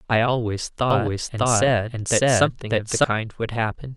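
A speech recording carries a doubled audio track from 0.90 s to 3.04 s. A second full-band copy of the speech runs about 0.7 s behind the first, at roughly the same level. It has no decay or room colour, so it does not sound like an echo. It begins and ends abruptly at those times. The likely cause is a second capture of the same signal through a slower path.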